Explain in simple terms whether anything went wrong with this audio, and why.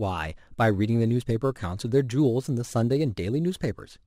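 Crude rate conversion runs through the whole speech clip. Samples were repeated without filtering, leaving a gritty, off-key fizz on loud and bright sounds, unlike clipping's harsh crackle only at peaks.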